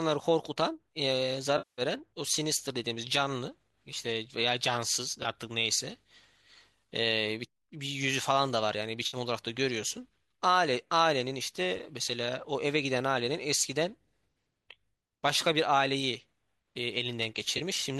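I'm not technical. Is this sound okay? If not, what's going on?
No. AAC frame loss with concealment occurs at 1.58–1.82 s, 5.23–5.26 s, 9.07–9.17 s and 17.58–17.61 s: chunks of the compressed speech went missing, and the player patched each gap by guessing from the sound just before. The longest, at 1.58 s, lasts about 0.2 s.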